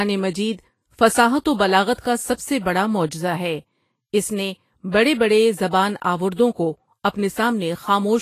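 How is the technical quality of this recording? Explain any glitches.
The recording is clearly compromised by coding damage throughout, plus three brief smeared attacks.

Vorbis compression: Across the whole speech clip the treble sounds hissy and grainy, tones are roughened, and nothing is present above 14.2 kHz. This is likely Vorbis at a low setting, consistent with roughly 31 kbps. At that rate the codec cuts off the top of the spectrum and quantises the remaining high frequencies so coarsely that fine detail turns into noise of similar energy.

Pre-echo: A short hiss arrives just ahead of three sharp onsets and leaves each attack softened. It appears from 1.94 to 1.98 s, right after "مجید فصاحت و"; from 4.91 to 4.94 s, after "معجزہ ہے اس نے" and before "بڑے بڑے"; and from 6.34 to 6.39 s. The smear lasts 46, 28 and 49 ms. Each attack falls late in a transform block, and the noise suited to the loud part spills into the quiet moment before it.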